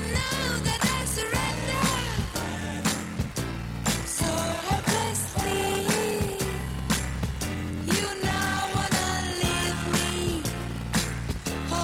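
From start to finish the clip carries a block size mismatch with zero padding. One stage delivers shorter blocks than the next stage takes in, so each block ends with a brief stretch of silence. That produces a steady buzz at 38.3 Hz, the block rate. The audio also runs slow, at 0.889 of normal speed, while its pitch stays about right. This fits 1024-sample writes into 1152-sample reads. On a waveform, regular flat gaps appear. On a spectrogram, evenly spaced thin vertical stripes mark each gap.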